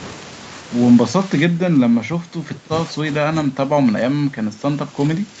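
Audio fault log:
1.25–2.96 s and 3.3–5.4 s, speech suppressed in double talk: the talker ducks by up to roughly 15 dB, likely the echo canceller clamping down while both sides spoke.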